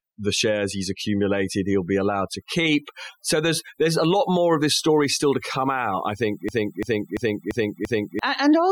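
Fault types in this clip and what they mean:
Overdone noise removal: Noise reduction set far too aggressively runs through the whole clip, gating individual frequency bands whenever they sit near the noise estimate. The background drops to near silence with twinkling specks, and the quieter components of the speech vanish with it. On a spectrogram the gaps between words look almost empty apart from isolated bright dots, and the speech itself shows ragged, patchy harmonics with missing pieces.
System hang loop: From 6.49 s to 8.19 s, just after "come out I think", the system froze while the audio hardware kept replaying its ring buffer. One 341 ms chunk repeats exactly five times at 2.93 Hz, which fits a 16384-sample buffer at 48 kHz. About a second and a half of real audio is lost. Waveform and spectrogram show identical blocks tiled side by side with abrupt seams.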